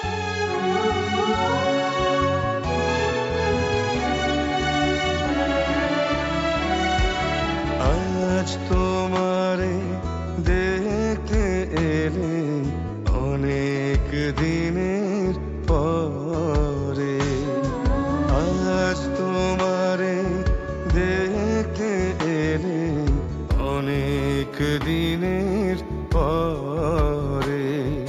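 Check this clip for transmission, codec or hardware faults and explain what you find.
One fault turns up near the end. From 23.50 s to the close at 28.08 s, the top of the band goes dull and a faint metallic shimmer rides on the brightest parts of the sound. This is imaging from linear upsampling. Audio at 16 kHz was raised to 48 kHz by joining samples with straight lines, which filters poorly. It rolls off the upper range and leaves a mirrored copy of the spectrum at 8 to 16 kHz, about 35 dB down.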